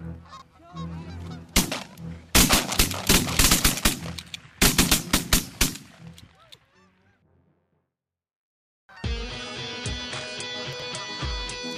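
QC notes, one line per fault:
0.37–0.42 s and 10.73–10.82 s, chunks out of order: a 23.22 ms chunk plays one slot late at the first spot and three slots late at the second. Nothing's missing, but the order jumbles, leaving three hard joins each time.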